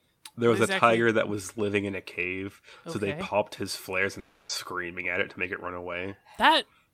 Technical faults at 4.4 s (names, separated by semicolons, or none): long network dropout